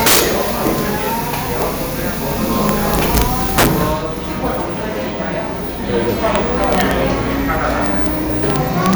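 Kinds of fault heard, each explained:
Integer overflow: peaks past the integer limit wrap to the opposite sign instead of clipping, giving violent cracks, harshest near 0.0 and 3.6 s, about 9 dB over.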